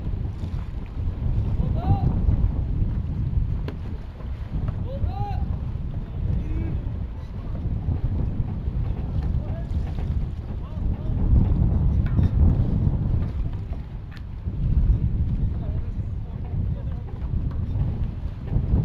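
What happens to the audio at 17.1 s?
At 17.1 s the audio carries imaging from linear upsampling, which runs through the whole clip rather than starting there. The band fits a 16 kHz source raised to 44.1 kHz by straight-line interpolation. That weak filter dulls the top of the original band and leaves a faint mirrored copy between 8 kHz and 16 kHz, roughly 55 dB down, heard as a light metallic shimmer on bright, hissy content. A spectrogram shows that upside-down ghost band above 8 kHz.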